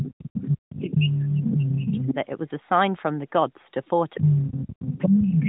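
Other side's voice leaking through runs from 0.0 to 1.68 s, returns briefly from 1.87 to 2.14 s, and comes back from 4.14 s to the end. A second voice sits in the recording, about as loud as the talker in the first and last stretches and somewhat quieter in the short middle one. The likely cause is a device playing the far end on its loudspeaker while the echo canceller fails to subtract that playback from the microphone signal.

Speech suppressed in double talk begins at 4.18 s and lasts to the end, overlapping the final echo stretch for roughly 1.3 seconds. The talker's level falls away in pieces, dropping as much as roughly 25 dB at its deepest, so parts of the voice thin out or vanish while the other voice continues. This likely comes from the echo canceller treating the overlap as echo and turning everything down together.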